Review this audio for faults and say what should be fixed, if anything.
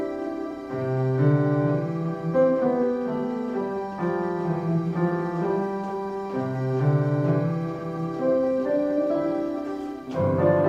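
Nothing here needs fixing; no faults were found.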